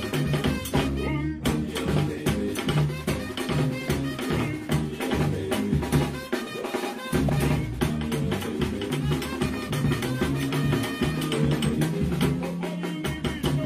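At 7.27 s there's a brief burst of damaged data in the compressed stream, lasting about 30 ms to 7.30 s. A stretch of the coded bytes got corrupted, so the decoder misread those frames and lost sync, and you hear a quick glitch in the sound.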